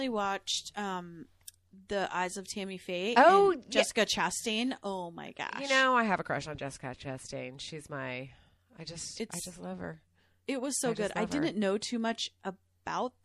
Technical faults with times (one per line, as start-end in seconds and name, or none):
0.00-13.24 MP3 compression